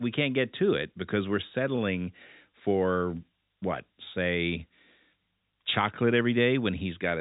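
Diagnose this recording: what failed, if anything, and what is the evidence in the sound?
At about 1.76 to 1.80 s there's a short stall from a late packet, so the failure is on the network side, landing in the jitter buffer. The speech briefly hangs, with one sound held roughly 16 ms too long and a faint buzzy dip, but nothing is actually skipped. The packet arrived late, the buffer ran dry, and the receiver stretched the last bit of audio until it showed up, then carried on from the same spot, about 16 ms further behind. The call path itself is band-limited with nothing above 4 kHz, which fits G.711 mu-law.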